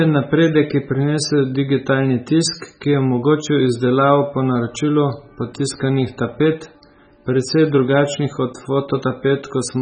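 MP3 compression damage runs through the whole speech clip: nothing survives above 9 kHz, and heavy watery swirling and smeared consonants point to an encoder likely starved of bits, consistent with a very low bitrate around 16 kbps, cutting the treble and zeroing weak frequency lines.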